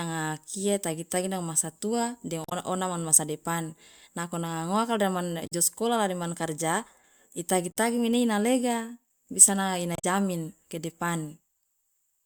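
Speech with four quick glitches from damaged data in a compressed stream: 2.42 s after "masa tua de", 5.46 s after "depan nako nanga ngoaka", 7.70 s after "de man karja itagi", and 9.95 s. Each time, the decoder hits corrupted frames, loses sync and hunts for the next header. The first glitch adds about 10 ms.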